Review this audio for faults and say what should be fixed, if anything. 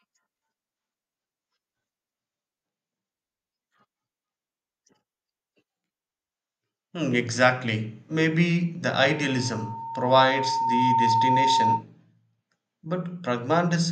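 Loudspeaker feedback squeal runs from 9.04 to 11.83 s: a 912 Hz tone swells over about two seconds until it sits roughly 5 dB above the speech, because the microphone hears its own loudspeaker and the loop gain at that frequency exceeds one. To prevent it, reduce gain or increase microphone-to-speaker distance, and notch out the 912 Hz ring frequency.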